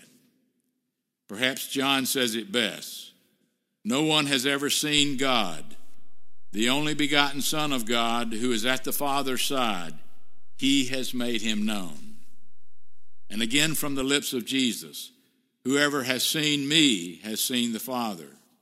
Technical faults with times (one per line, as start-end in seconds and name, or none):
4.98-14.01 DC step